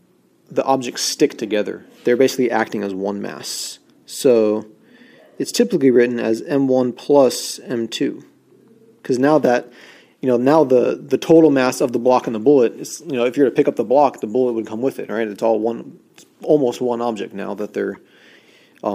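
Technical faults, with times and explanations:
17.94–17.96 s, corrupt frame decoded: flipped bits in a few compressed frames were decoded anyway, misplacing spectral energy and producing a brief noisy blip peaking around -25 dBFS.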